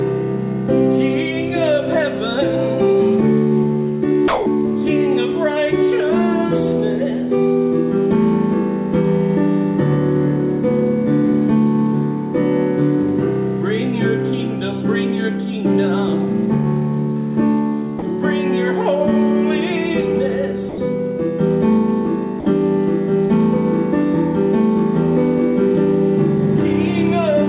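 At 4.28 to 4.46, 17.99 to 18.02, 20.69 to 20.78 and 22.40 to 22.46 s, stretches of 180, 30, 90 and 60 ms drop out and give way to steady noise or near silence before the sound resumes. This is likely sound dropped by the voice detector, which judged those moments to be background, stopped sending, and left the receiver filling them with comfort noise. The band-limited character, with nothing above 4 kHz, fits a G.711 call path.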